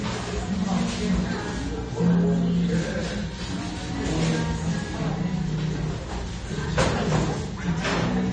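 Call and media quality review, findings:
Transcoding between lossy codecs, throughout. Top end dull, nothing above 9 kHz. Two layers of artefacts heard together. Likely a WMA encode re-encoded to low-rate AAC-LC, near 32 kbit/s. That second codec wastes bits on the first one's damage and adds its own.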